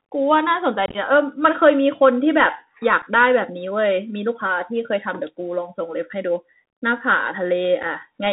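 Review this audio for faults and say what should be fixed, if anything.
Bluetooth CVSD headset codec, throughout the whole clip. The speech has been squeezed through the narrowband headset codec, which sends one bit per sample saying only up or down and adapts its step size. Nothing above 4 kHz survives, so the sound is muffled. Loud, bright sounds outrun the step and distort, s sounds turn scratchy, and a granular hiss sits under the speech, which fits a 64 kbit/s CVSD link. Preventing it means switching the headset to a wideband profile such as mSBC or LC3, or recording through a wired microphone.

Unconcealed Bluetooth headset packet loss, from 0.86 to 0.97 s, at 3.02 s, and from 7.83 to 7.85 s. Voice packets between headset and phone went missing and were replaced by silence or an idle pattern rather than concealed. The first event is the worst: about 67.5 ms of sound drops out in pieces across 90 ms, the longest gap lasting 22.5 ms. 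That pattern suggests something like twenty lost packets, and it makes the speech crackle and chop. The two later holes each lose 7.5 ms and are brief, abrupt gaps. Preventing it means keeping the headset close to the phone, clear of Wi-Fi and other 2.4 GHz interference.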